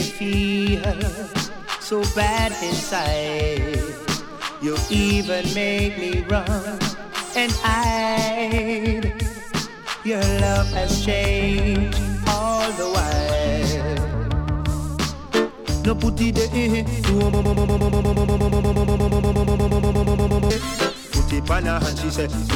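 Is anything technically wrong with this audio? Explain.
Yes. At 17.33 to 20.50 s, a broken-record loop repeats one 119 ms fragment 27 times, likely from a stalled player resending its last chunk. It sounds like a rapid stutter, and the waveform and spectrogram show identical tiles.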